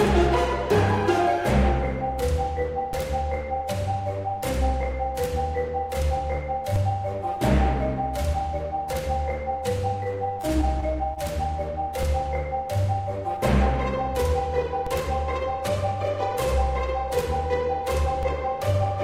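At 2.93 s a low thump sounds while the audio carries on unchanged. This is a DC step: the waveform's zero line jumps to a new offset, then drains away as a 20 Hz high-pass pulls it back. From 10.03 to 11.18 s the sound turns choppy and robotic, with six short holes, the longest about 25 ms. This is repeated packet loss. Each missing stretch was patched by extending the preceding sound, and about 40 ms of audio is gone altogether. The same DC step thump returns at 14.87 s and again at 18.23 s, each time easing off through the 20 Hz high-pass.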